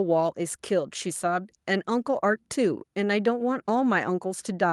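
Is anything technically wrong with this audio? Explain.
No, nothing technically wrong can be heard here.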